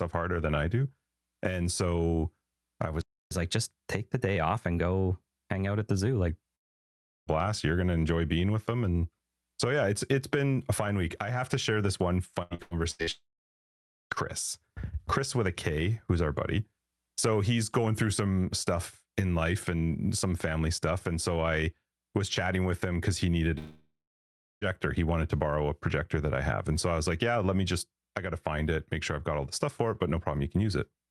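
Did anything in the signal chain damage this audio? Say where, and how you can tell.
Yes. A playback stall at 3.01 to 3.31 s silences the audio for about 0.3 s mid-flow. The likely cause is a starved or blocked player buffer.

Catch-up at higher speed follows "do and so i", from 3.31 to 6.28 s. The player runs 1.1 times fast, raising pitch about one and a half semitones until the backlog clears.

Three long network dropouts occur at 6.55 to 7.29 s (ending before "you're gonna enjoy being"), 13.11 to 14.13 s, and 23.58 to 24.64 s (after "them because he needed"). Each starts as a fading buzz or hiss, then silence. Roughly 0.7 to 1 s is lost, likely from network interruption.

Repeated packet loss makes the audio choppy and robotic from 12.42 to 13.10 s. Five gaps, the longest 83 ms, are patched by concealment covering nearly half that stretch.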